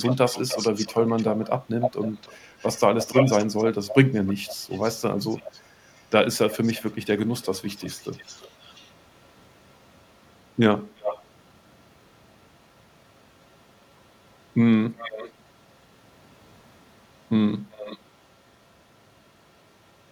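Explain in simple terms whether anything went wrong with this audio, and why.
A delayed repeat of the speech trails about a third of a second behind it at 0.01–9.75 s, 10.97–11.26 s (loudest), 13.4–15.74 s, 16.75–19.19 s and 19.89–20.11 s (barely there). This is echo leak, likely from a speakerphone sending its own playback back into the call.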